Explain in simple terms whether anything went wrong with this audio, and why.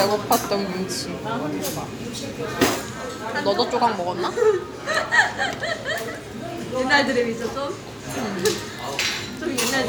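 Nothing went wrong with this audio, so there is no fault to explain.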